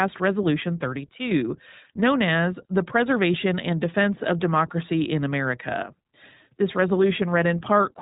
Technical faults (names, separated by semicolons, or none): iLBC codec